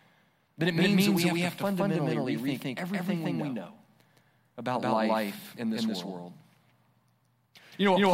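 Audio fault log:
Throughout, doubled audio track: the speech comes through twice, with a second full-band copy landing roughly 150 ms behind and sitting at about the same level as the original. That gap is too long to blur into one sound, so every syllable gets a distinct slapback. There's no decay or room colour on the copy. That points to the same signal being mixed back in, likely through a slower second capture path, rather than to an acoustic echo.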